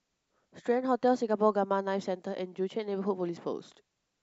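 Speech recording with no audible technical faults.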